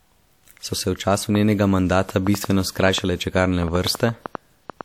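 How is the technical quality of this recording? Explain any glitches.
The recording has one clear glitch. From 1.35 to 4.82 s, a train of clicks runs over the speech. About twenty sharp, similar clicks arrive irregularly at roughly five per second, peaking about 10 dB above the speech. This is likely interference or a faulty connection or power supply. Its repeating, same-shaped pulses set it apart from a single isolated pop.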